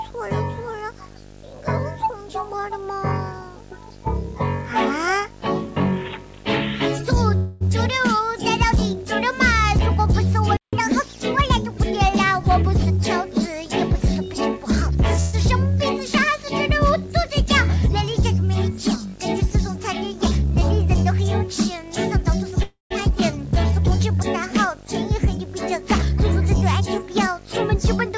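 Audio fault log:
throughout: video or display buzz. A coarse buzz at 50 Hz sits under everything, about 20 dB below the sound, with a gritty hash of harmonics above it and a thin, piercing whistle near 15.6 kHz. Those two figures give it away: the 50 Hz is the picture's field rate and the 15.6 kHz tone is the line scan, so a screen or video cable is leaking into the audio wiring. The whistle gets through even though the call path carries nothing above 8 kHz.
7.36–7.63 s, 15.20–15.35 s, 22.63–22.92 s: call audio freeze. Each time the last moment of sound hangs on as a smeared buzz that fades away. It lasts 0.25 s, 0.13 s and 0.28 s, and in the third case it fades to silence for about 0.14 s. Then the audio picks up exactly where it stopped, with nothing lost, only delayed. The likely cause is packets held up in transit, leaving the jitter buffer empty, so the receiver stretched out the last sound it had until data arrived.
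10.57–10.73 s: playback stall. The sound cuts out mid-flow for about 0.16 s of silence, then carries on from where it left off. There is no fading tail and no hum filling the gap, just a hard stop and restart. That points to the player likely running out of data or having its audio thread blocked. Output simply halted until it recovered instead of being papered over.
10.73–11.78 s: catch-up at higher speed. Right after the stall the audio runs 1.15 times fast for about a second. Everything is hurried and sits noticeably higher, roughly two semitones sharp, before settling back to normal speed and pitch. The player is working off the backlog left by the stall by resampling it faster. That is why speed and pitch rise together, unlike a pitch-preserving time squeeze.
12.30–13.43 s, 14.15–15.18 s, 22.41–22.52 s, 25.27–28.11 s: jitter buffer speed-up. The audio runs faster while its pitch stays put. 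It runs about 13%, 6%, 29% and 4% fast in these four stretches, with roughly 150 ms, 70 ms, 40 ms and 150 ms taken out in total. The receiver held more buffered audio than it wanted and clipped out many tiny slivers, each a pitch period or a few, to cut the delay. The first three stretches sound hurried without any shift in pitch.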